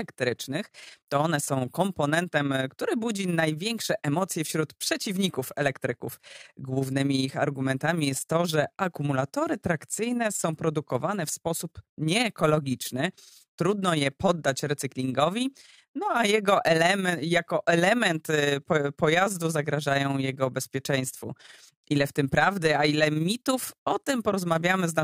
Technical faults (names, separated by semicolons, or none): overlap-add ripple